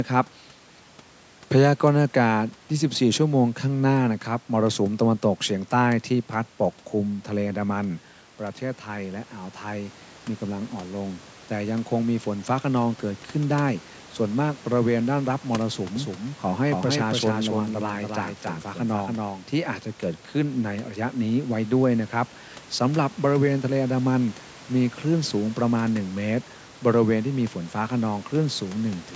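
Doubled audio track, 15.96 to 19.78 s: a dry copy trails about 300 ms behind at about 5 dB lower, likely from a slower capture path.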